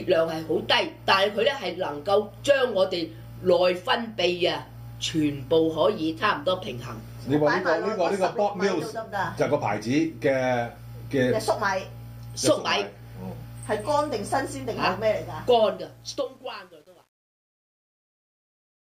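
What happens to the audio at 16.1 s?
Truncation distortion on a fade runs from 15.68 s to the clip's end, with the worst from 16.16 s. The fade-out is rounded off without dither, which fits a 9-bit stage, so its quiet tail turns stepped and gritty.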